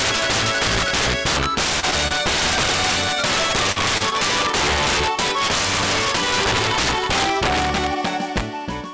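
Integer overflow runs through the whole clip. The loudest peaks are driven about 9 dB past full scale. Instead of being limited, those samples wrap around to the opposite sign. A small share of samples is affected, but each one cracks harshly, far sharper than ordinary clipping.

At 1.80 to 1.85 s there is a short concealed packet loss. About 20 ms of audio never arrived. The receiver covered the hole with 27 ms of continued sound, then blended back. It is heard as a brief smear or wobble.

At 2.08 to 2.13 s there is a short stall from a late packet. The jitter buffer ran dry, so the last sound was stretched for 27 ms until the packet came. Nothing is lost. The sound is simply held too long, with a faint buzz or dip.

From 3.15 to 4.58 s there are scattered short gaps. About five separate holes appear, totalling 60 ms of missing audio, the longest around 40 ms. Each is patched by continuing the previous sound, so ticks and small hiccups are scattered through this span. 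The call path passes nothing above 8 kHz, which fits a G.722 codec.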